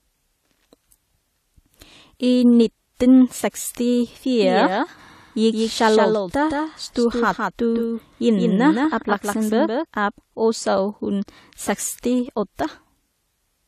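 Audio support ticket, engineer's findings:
Transcoding between lossy codecs, throughout the clip. Nothing above 14.1 kHz. Two different sets of compression artefacts are audible together. Likely cause is an earlier WMA-type encode re-encoded to AAC-LC at a low rate. The second encoder spends bits on the first encoder's artefacts and adds its own, and the lower cut-off carries through.

Doubled audio track, 4.41–9.85 s. A second full-band copy of the speech trails the original by around 150 ms, about 5 dB quieter, with no decay or room colour. It starts abruptly just before "av også hun" and drops out abruptly. Probable component: a slower parallel capture path, likely mixed back into the main feed.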